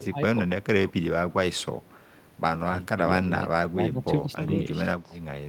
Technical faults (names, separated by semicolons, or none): speech suppressed in double talk